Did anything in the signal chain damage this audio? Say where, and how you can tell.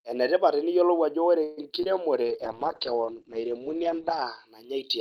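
Yes. Right after "ajo ore", from 1.43 to 1.59 s, the audio stretches the last sound into a fading buzz for about 138 ms, then resumes where it left off. Nothing is lost, but everything afterwards arrives 138 ms later. This is likely a call audio freeze at the network and jitter-buffer stage, where delayed packets drained the buffer. On a spectrogram the harmonics smear flat and decay, with no break in the waveform.

Shortly after, two short concealed packet losses occur at 1.69 to 1.82 s and 1.83 to 1.87 s, each dropping about 20 ms of real audio. The decoder patched the first gap with 11 ms of extrapolated sound, adding about 10 ms, and the second with 18 ms. Both are heard as brief smears or wobbles. A spectrogram shows short blurred slices where the fine detail vanishes, and the waveform shows small joins that do not quite match.

From 2.25 to 4.53 s there is a call bitrate drop in the codec stage. 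Opus fell from 48 to 9 kbps and stayed at the lowest rate for about 2 s. Audio bandwidth shrank from 20 kHz to 8 kHz, so the sound turns muffled and watery. A spectrogram shows a hard ceiling at 8 kHz with patchy, blocky energy below it, which lifts when the rate recovers.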